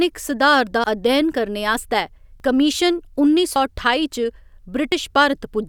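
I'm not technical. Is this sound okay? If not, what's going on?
No. At 0.84, 2.4, 3.56 and 4.92 seconds the speech jumps, likely from a dropped buffer (overrun): a chunk was overwritten before being saved, about 70 ms at 0.84 and about 40 ms elsewhere. There's no pause, as a dropout would leave; the sound simply skips ahead.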